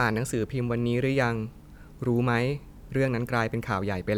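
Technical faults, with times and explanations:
Nothing technical goes wrong anywhere in this bit of speech, so there's nothing here to list.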